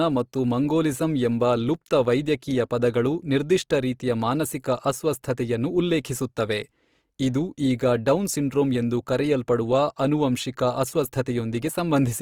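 A speech clip with plainly audible compression damage throughout. The speech sounds grainy, rough and noisy. The top end reaches about 20.4 kHz, so bandwidth is not narrowed. The likely cause is Opus compression in music mode, which fits a rate near 24 kbps.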